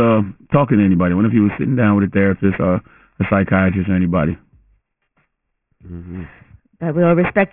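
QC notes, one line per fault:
throughout, aliasing. Speech energy above 3 kHz folds back as gritty, unrelated tones. This fits an unfiltered drop to a 6 kHz rate.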